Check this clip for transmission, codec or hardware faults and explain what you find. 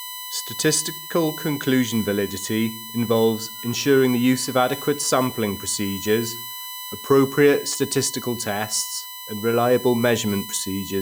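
One hardware fault is present, running through the whole clip. USB whine: a 1 kHz whine whose harmonics peak at 12 kHz, about 15 dB under the speech, as 1 ms bus frames leak into power. Mains hum would sit far lower in pitch.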